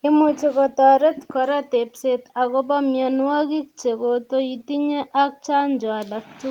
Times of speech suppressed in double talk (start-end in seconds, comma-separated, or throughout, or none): none